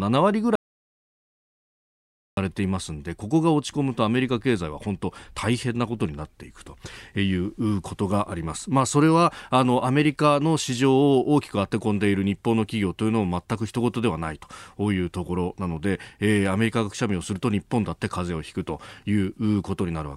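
At 0.55 s the speech cuts off abruptly into an audio dropout to silence lasting about 1.8 s, until 2.37 s. The gap is pure silence with no room tone, likely from a lost input signal while recording continued, and that stretch of speech is gone.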